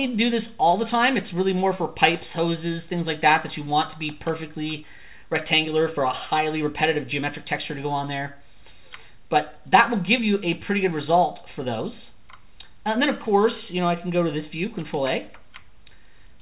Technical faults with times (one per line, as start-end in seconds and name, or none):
none